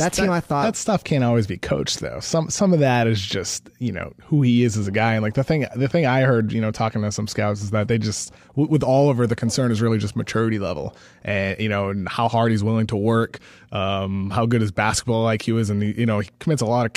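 From 0.14 to 16.93 s, clock slip clicks form a soft rattle about every 50 ms, likely unsynchronised clocks roughly 400 ppm apart slipping samples.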